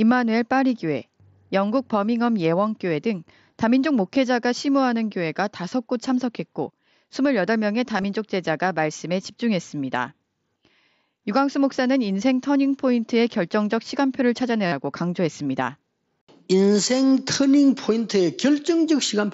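At 5.69 to 5.72 s, 7.98 to 8.04 s and 14.67 to 14.72 s the speech shows concealed Bluetooth headset packet loss. Lost headset packets were filled by repeating a matching stretch of recent waveform, so runs of lost packets come out as a short buzzy tone at full level. The middle event is scattered over 60 ms, while the last, about 52 ms of fill, is longest. On a waveform these look like periodic copies; a spectrogram shows flat harmonic stripes breaking the speech contours, all within the mSBC wideband limit.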